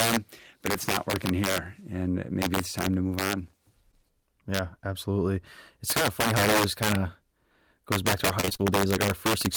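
All the way through, there's integer overflow: the loudest peaks get pushed about 10 dB past full scale, and instead of being limited they wrap around to the opposite sign. Only a small fraction of samples goes over, but each one snaps across the whole range, so you get harsh, violent cracks on the loud bits, much nastier than ordinary clipping.

Right after "time to move on", around 3.91 to 3.95 s, there's a short concealed packet loss. A sliver of audio never arrived, and the receiver patched the hole by stretching the last bit of sound before blending back in. You hear a quick smear or wobble right there.

Then from about 8.41 to 8.61 s, just after "goes back to our", it's repeated packet loss with that robotic sound. Five holes up to 24 ms long keep coming one after another, and about half that stretch is patched-over continuation, so it goes choppy with pieces missing.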